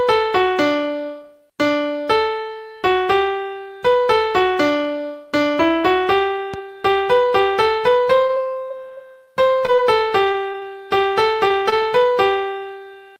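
At 6.54 to 6.56 s a single loud pop, roughly 5 dB above the surrounding sound, sits on top of the audio; likely a voltage step from a switch or plug, it appears as a sharp vertical spike on the waveform and a full-height broadband stripe on the spectrogram.

From 8.27 to 10.64 s, repeated packet loss (robotic sound) leaves around fifteen holes of up to 20 ms, each patched by stretching the previous sound, giving choppy audio with repeated slivers and smeared vertical seams on the spectrogram.

At 11.48 and 11.70 s, short concealed packet loss drops about 20 ms each time; the filled-in continuation causes a brief smear or wobble, visible as a short blurred patch interrupting the spectrogram's detail.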